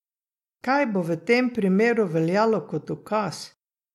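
A short speech recording, and nothing in it sounds technically wrong at any point.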